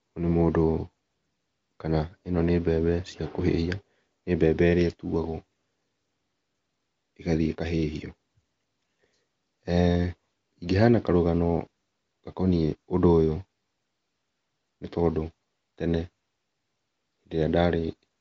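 Nothing stood out on listening to this speech; it carries the AMR wideband (HD Voice) coding at 23.05 kbit/s, audible as a band that stops at about 7.1 kHz.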